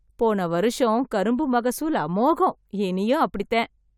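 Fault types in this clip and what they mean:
No technical faults can be heard, and the speech signal stays steady and intact throughout.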